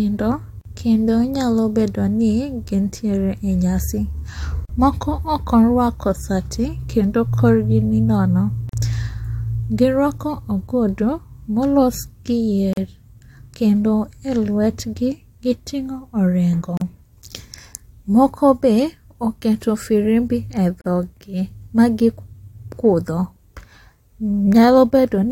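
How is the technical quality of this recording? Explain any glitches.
The speech is interrupted by a recurring fault, a gap at a join of encoded pieces. It occurs six times, every 4.0 s: at 0.61 s (just before "kendo nyalo bedoni gintiere"), 4.65 s, 8.69 s (right after "kendo korgi ni nono"), 12.73 s, 16.77 s and 20.81 s (right after "moko be oketo firimbi"). Each gap lasts about 40 ms (39 ms for the first). The audio appears to have been encoded in 4-second segments and then concatenated without trimming. Each segment's leading encoder delay and padded final frame were left in, creating a brief dropout before the speech resumes exactly where it stopped. In the waveform, each gap is a flat, near-zero stretch with smeared edges. In the spectrogram, it appears as a thin vertical blank band across all frequencies at regular 4-second intervals.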